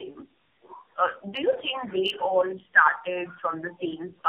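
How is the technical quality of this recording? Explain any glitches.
Technical quality is poor throughout. For the whole clip, the speech sounds rough, muffled and warbly. That is tandem speech coding: the signal was decoded and re-encoded repeatedly, and each pass degraded the previous output further. The character fits a chain of about four narrowband speech coders, with the background room noise sitting about 54 dB below the speech.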